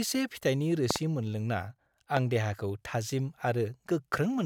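Speech with loud pops at 0.91–0.98 s (a double pop, about 20 dB above the speech) and 2.17–2.19 s (about 15 dB up), likely voltage transients.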